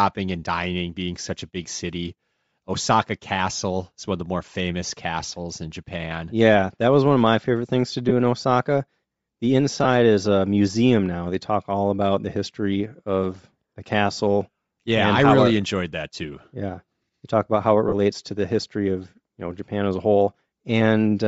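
A speech clip with a breathy, grainy edge throughout. The upper spectrum sounds thin and filled with noise. This is likely Bluetooth LC3 compression, the LE Audio transform codec, working with short 7.5 ms frames. The plainly audible damage fits a low rate around 32 kbps. There are lost LE Audio frames at 8.09 to 8.11 s, 9.84 to 9.86 s and 17.88 to 17.94 s. The first two fit about 15 ms of missing audio each, and the third about 37.5 ms. In each gap the decoder repeats the last spectrum with random signs.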